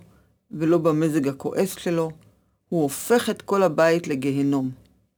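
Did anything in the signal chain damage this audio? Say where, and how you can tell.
Yes. The damage happened at sample-rate conversion, and it runs through the whole speech clip. A gritty, inharmonic fizz follows the louder and brighter parts of the speech, sitting roughly 30 dB below the signal. This is crude rate conversion. Samples were dropped or repeated in a fixed cycle instead of being filtered, which fits a 48 kHz to 44.1 kHz change. That periodic timing error produces shifted, inharmonic copies of the speech itself.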